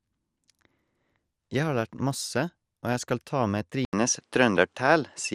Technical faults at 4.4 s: MP2 compression; input switched to a poorer device

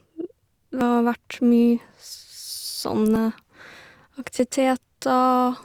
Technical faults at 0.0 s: none

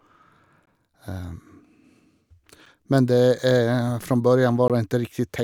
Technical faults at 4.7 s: gap between stream segments

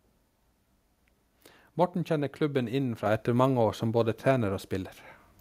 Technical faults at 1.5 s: none

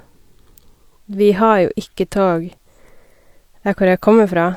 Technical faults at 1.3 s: none

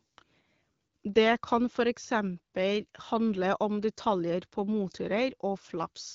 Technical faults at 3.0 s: none

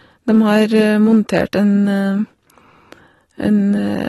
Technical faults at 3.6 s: AAC compression

